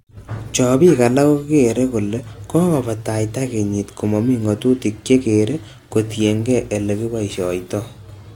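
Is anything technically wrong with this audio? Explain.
No, nothing technically wrong can be heard in this speech recording. It comes across as an intact, continuous signal with no audible faults anywhere in it.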